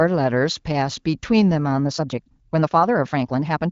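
From 1.82 s to the end, the speech runs about 1.57 times faster with no change in pitch, a time-stretched section. It is likely the work of software that shortens audio by dropping short pieces, so the pace jumps abruptly and sounds rushed, heard through AMR-WB wideband audio with nothing above 7 kHz.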